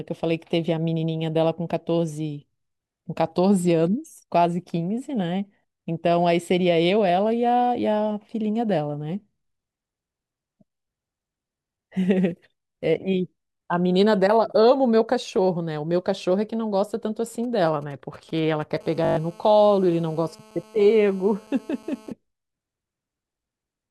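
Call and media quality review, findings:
Compressed frames skipped at 5.63 s. Audio jumps ahead roughly 70 ms, consistent with about three 24 ms frames dropped. Probable component: decoder or file.

GSM signalling bursts, 17.44 to 18.78 s. Galloping ticks and short buzzes at 217 Hz, roughly 30 dB below speech. Probable component: nearby 2G phone in signalling state, rectified in audio circuitry.

GSM phone buzz, 18.81 to 22.12 s. Steady raspy 217 Hz buzz, many harmonics, about 28 dB below speech. Probable component: nearby 2G phone in a call, transmitting in bursts 217 times a second. Bursts rectified into audio.

System hang loop, 19.05 to 19.17 s. A 20 ms fragment repeats six times, giving a 50 Hz buzz. Roughly 100 ms of speech lost. Probable component: driver or host stall while hardware recycled a short ring buffer.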